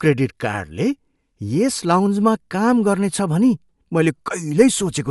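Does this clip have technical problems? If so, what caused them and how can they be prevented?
Yes. Throughout the speech, Bluetooth LC3 compression is the likely cause. Its 10 ms transform frames appear to be coded at a rate that fits about 48 kbps. Spectral detail is discarded, leaving a grainy, breathy edge and nothing above 11.5 kHz. To prevent this, record over a wired connection or set the LC3 link to a higher bitrate.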